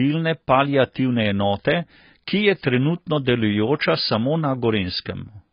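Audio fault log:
Throughout, AAC compression: the speech sounds dull and smeared, with nothing at all above 5 kHz, so sibilants lose their edge and come across as a soft, fizzy hiss. Sustained vowels pick up a watery warble. That points to AAC-LC at a low rate, likely somewhere around 16 kbps. At that budget the encoder pulls its cut-off right down and quantises the remaining frequency lines so coarsely that bands drop out or get patched with substitute noise, which is heavy damage.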